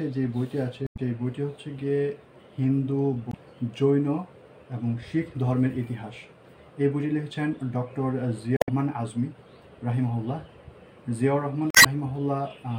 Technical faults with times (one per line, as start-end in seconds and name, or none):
0.85-0.99 damaged data in a compressed stream
3.30-3.34 damaged data in a compressed stream
8.55-8.69 damaged data in a compressed stream
11.70-12.03 damaged data in a compressed stream